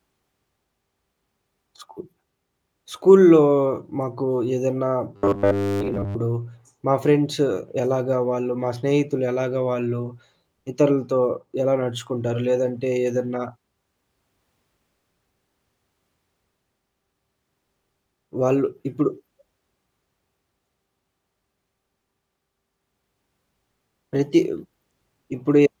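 From 5.16 s to 6.16 s the speech turns into a rigid, metallic buzz at 100 Hz that tracks the original only loosely. This is robotic sound from repeated short buffers, most likely caused by audio arriving too seldom, so the software kept replaying the last 10 ms, which fits the 100 Hz rate, for most of that second, skipping the real audio in between.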